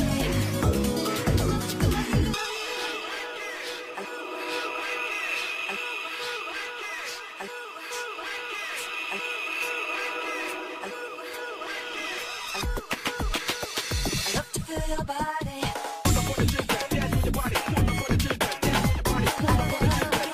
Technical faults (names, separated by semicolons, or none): crude rate conversion